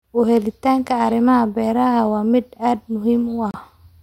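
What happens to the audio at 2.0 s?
Nothing goes wrong at 2.0 s; the speech continues intact through that moment, with no dropout, click or distortion.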